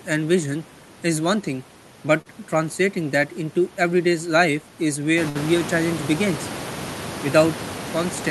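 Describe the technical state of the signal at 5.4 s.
A burst of packet loss runs from 5.29 to 5.37 s: the receiver stretched the last sound for about 56 ms, fading it, then resumed with roughly 60 ms of speech missing.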